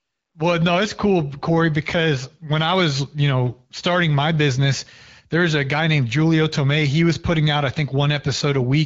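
The speech comes through the AMR wideband (HD Voice) codec at 12.65 kbit/s, a rate that keeps speech clear with only light coding colouration, and nothing in the signal points to a fault.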